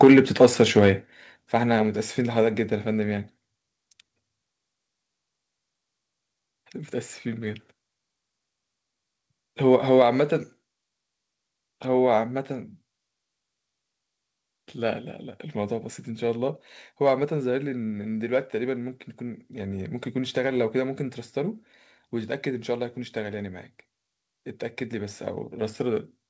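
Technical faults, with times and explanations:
0.02 to 0.9 s, microphone overload: The opening stretch sounds harsh and crackly on its loudest moments, with peaks pushing roughly 7 dB past what the converter can hold, so their tops get sheared flat. Only a small slice of samples, around 2 percent, actually hits the ceiling, but that's enough to give it a gritty edge. The likely cause is the mic input gain set too hot going into the call.
0.04 s, 1.05 s and 10.02 s, microphone volume stepped down: You can hear the level drop abruptly three times, by about 2 dB, then about 5 dB, then about 4 dB. Background and foreground drop together each time, and the first one lands right at the start of that distorted opening. It likely comes from the call software's automatic gain control spotting the overload and cutting the device's input volume in single steps. The audio on the G.722 path stops at 8 kHz, so these level steps come through without much top end.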